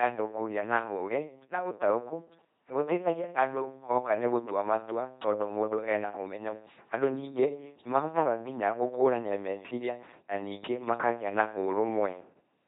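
Speech throughout comes out as a buzzing, mechanical robot voice with nothing above 3.8 kHz, the heavy damage of an LPC-10 vocoder. It rebuilds every moment from a ten-pole vocal tract filter driven by either a pulse buzz or noise, consistent with 2.4 kbit/s.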